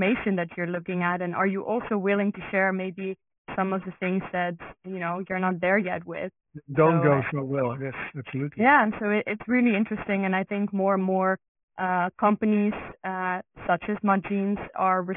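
Speech, with aliasing throughout. The audio was resampled to a rate that points to 6 kHz without an anti-alias filter. Content above 3 kHz folds back below it. Sibilants turn gritty and metallic. The folded energy sits around 15 dB below the signal.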